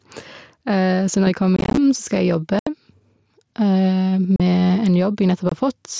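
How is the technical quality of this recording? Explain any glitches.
The recording has two faults: a level that breathes throughout, and four bursts of dropped audio from the Bluetooth headset link. The band stops at 8 kHz, as the wideband mSBC headset codec allows.

Gain pumping runs through the whole clip. The microphone gain is likely set too high, with a fast limiter clamping each loud syllable, so the level swings by about 5 dB, leaving the speech squashed.

Unconcealed Bluetooth headset packet loss occurs from 1.56 to 1.78 s, right after "når jeg kommer", and again at 2.59–2.67 s, 4.36–4.40 s and 5.49–5.52 s. Short voice packets between headset and phone never arrived and were replaced by silence or an idle pattern without any concealment. In the first burst, about 128 ms of scattered gaps over 210 ms, none longer than about 23 ms, make the speech sound rough and chopped. The later ones lose about 75, 38 and 23 ms of audio.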